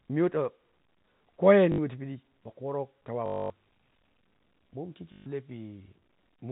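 At 1.72 s, 3.26 s and 5.12 s the speech breaks into a short robotic stutter lasting 60 ms, 240 ms and 140 ms. This is packet loss with the last packet repeated: the receiver replays the previous block. The 3.26 s run buzzes at about 50 Hz, which fits 20 ms packets. Unlike a plain dropout, the gap is filled, not silent, over narrowband G.711 telephone audio.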